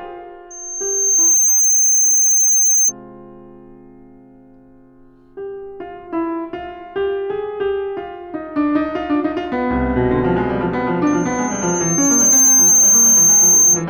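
Loudspeaker feedback squeal appears twice. From 0.50 to 2.92 s, a 6.3 kHz tone swells over about a second to roughly 10 dB above the music. It returns from 11.06 to 13.85 s, building more slowly. A microphone is hearing its own loudspeaker, and that loop is running away.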